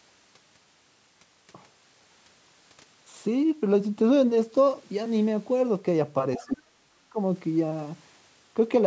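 From 6.37 to 7.18 s, likely speech suppressed in double talk: an echo canceller turning down both sides at once makes the talker's speech dip sharply, by roughly 35 dB at its deepest. At 6.46 to 6.53 s, the other side's voice leaking through, likely from residual loudspeaker echo, surfaces as a brief, faint scrap far below the talker.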